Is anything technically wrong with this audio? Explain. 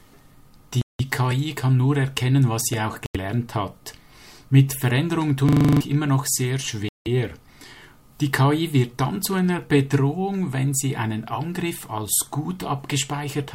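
Yes, there are two kinds of fault. Bluetooth stall, at 0.82 to 1.01 s, 3.06 to 3.17 s and 6.89 to 7.08 s: the audio drops to silence for 179 ms, 87 ms and 174 ms, then resumes. This likely reflects radio interference delaying packets until the headphone buffer emptied and playback waited for retransmissions.

System hang loop, from 5.49 to 5.81 s: the host froze while the audio hardware kept replaying the same 40 ms stretch of its ring buffer. That piece repeats exactly eight times at 25 Hz, and about 0.3 s of audio is lost.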